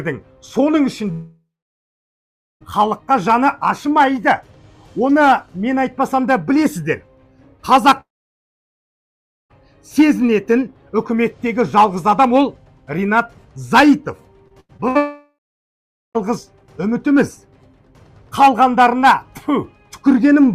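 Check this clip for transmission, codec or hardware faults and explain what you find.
Two kinds of fault are present: long network dropouts and a burst of repeated packet loss.

Long network dropouts hit at 1.11–2.63 s, 8.01–9.52 s and 14.97–16.17 s. Each fades out briefly, then goes silent, most likely because packets stopped arriving.

Repeated packet loss causes robotic sound at 14.48–14.97 s. Four short gaps, the longest 88 ms, are patched by continuing the previous sound. The audio turns choppy, with pieces missing.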